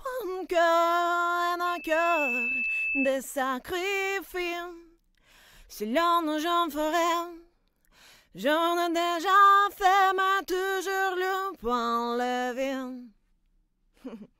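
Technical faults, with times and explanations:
1.66 to 3.17 s, loudspeaker feedback squeal: a single piercing tone near 2.6 kHz rises out of the audio, swelling over roughly half a second until it is about as loud as the rest of the sound, then holds until 3.17 s. A microphone was picking up the loudspeaker it was feeding, and at that frequency the loop's gain went above one, so each pass round the loop reinforced the tone.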